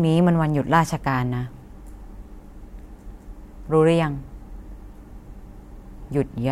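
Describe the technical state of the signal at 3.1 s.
At 3.10 s the speech breaks with a small tick and a near-instant dropout lasting a few milliseconds, then resumes from a different point in the recording. This is a CD skip: the laser jumped to another turn of the disc's spiral.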